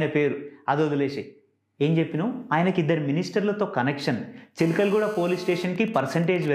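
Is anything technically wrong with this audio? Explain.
Yes, two kinds of radio interference from a nearby 2G phone get into the audio near the end.

From 4.60 to 5.65 s there is GSM phone buzz, a hard, raspy tone at 217 Hz with a dense series of harmonics, sitting about 17 dB below the wanted signal and unrelated to it. The handset is in a call, transmitting a radio burst 217 times a second, and the audio circuitry rectifies those pulses into a buzz. A spectrogram shows evenly spaced horizontal lines at 217 Hz multiples reaching high up the band; the waveform carries a regular pulse train.

From 5.76 to 6.48 s come GSM signalling bursts, heard as even ticks with a longer 217 Hz buzz twice a second, roughly 20 dB below the signal. The phone is still in the call, but the person using it has gone quiet, so it transmits only short groups of bursts, which the circuit again rectifies. On a spectrogram these appear as short vertical stripes of the same harmonic comb with gaps between them. 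The waveform shows clustered spikes rather than a continuous pulse train.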